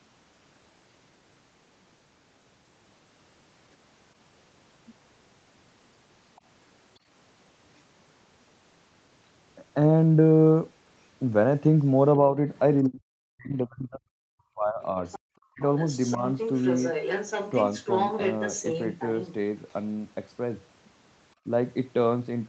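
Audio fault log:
6.36–6.41 s, other side's voice leaking through: a faint scrap of a second voice about 35 dB below the talker, likely loudspeaker echo the canceller left behind.
12.86–14.97 s, speech suppressed in double talk: the talker's voice drops out in pieces, falling by as much as about 40 dB for roughly one and a half seconds in total, likely the echo canceller turning everything down while both sides spoke.
15.06–15.19 s, other side's voice leaking through: a short burst of the far voice sits about 20 dB under the talker, likely residual echo that slipped past cancellation.
15.54–15.62 s, speech suppressed in double talk: a brief notch, about 25 dB deep, momentarily chops the talker, likely the canceller ducking the microphone while the far side spoke.
15.78–16.18 s, other side's voice leaking through: the far voice comes through again for under half a second, about 20 dB down, likely echo escaping the canceller.
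16.17–16.22 s, speech suppressed in double talk: a slight dip of about 5 dB in the talker's level, likely brief suppression as both sides overlapped.
16.38–19.34 s, other side's voice leaking through: a sustained stretch of the second voice, only about 10 dB below the talker, likely uncancelled loudspeaker echo.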